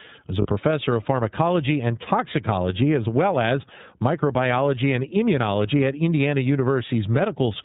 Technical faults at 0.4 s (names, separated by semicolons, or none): iLBC codec; lost iLBC frames